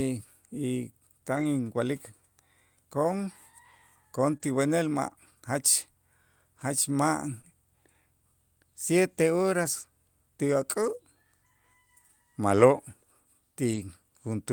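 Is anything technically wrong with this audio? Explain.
Yes. The speech has two kinds of network damage, and both are repaired well enough that no silent gap is heard.

Short concealed packet loss occurs at 4.37–4.42 s and 7.42–7.45 s. Each time about 20 ms of audio never arrived, and the receiver covered it by extending the preceding sound for about 22 ms and 18 ms. A voiced sound is continued from its pitch and an unvoiced one as shaped noise, before blending back. The result is a brief smear or wobble. A short consonant there may vanish. Unlike the error-correction repairs, what fills the hole is a guess built from the previous sound, not a degraded copy of the real audio.

Lost packets rebuilt from error correction occur at 1.35–1.45 s (60 ms), 4.42–4.44 s (20 ms, directly after the concealed loss), 9.63–9.65 s (20 ms), 10.81–10.95 s (80 ms), 12.59–12.61 s (20 ms) and 13.71–13.77 s (40 ms). 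The longer stretches fit several separate 20 ms packets lost within each span. Each missing packet was replayed from a low-bitrate copy carried in the next one, so the real content survives but sounds rougher and noisier for those moments.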